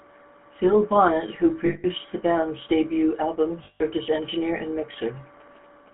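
A buzzy, gravelly roughness runs through the whole speech clip, with nothing above 3.4 kHz and little below 200 Hz. This is the GSM full-rate codec, which fits its 13 kbps rate. It rebuilds the voice from a vocal-tract model driven by sparse, regularly spaced pulses, so fine detail becomes grit.

From 1.66 to 1.86 s, just before "the band's debut album", the sound freezes into a rough, metallic ring. Again from 3.64 to 3.82 s, between "the band's debut album" and "as engineer and", the same ring appears. These are lost GSM frames: each gap, about 180 ms and then 160 ms, fits eight or nine bad frames replaced by repeats of the last good one.

From 4.93 to 5.89 s, after "as engineer and", a faint galloping dit-dit-dit of short buzzes sits about 30 dB below the voice, repeating at 217 Hz. These are GSM signalling bursts from a nearby 2G phone, whose radio pulses the audio circuitry rectifies into audible buzzes.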